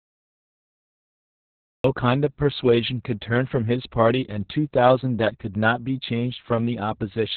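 The recording began late, so digital silence runs until 1.84 s, when the speech enters abruptly mid-sound with no natural attack: a cut-off start. Throughout, Opus voice compression in narrowband SILK mode, which fits a 6 kbps setting, discards everything above 4.4 kHz and coarsely codes the excitation, leaving speech muffled, hoarse and faintly robotic.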